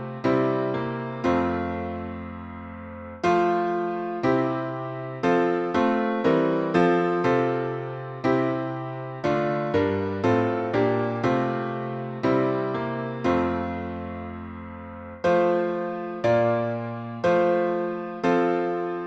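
No technical faults can be heard anywhere in the recording. Nothing breaks into the audio at any point, and the sound carries on without interruption.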